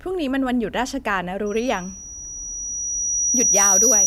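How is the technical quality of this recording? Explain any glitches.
The recording is marred by a loudspeaker feedback squeal. From 1.46 s to the end of the speech clip, a tone near 5.8 kHz swells over roughly two seconds until it sits about 10 dB above the speech. A microphone is hearing its own loudspeaker, and the loop gain exceeds one at that frequency, so the tone keeps feeding itself. On a spectrogram it is a bright horizontal line at 5.8 kHz. On the waveform, the envelope grows, then levels off.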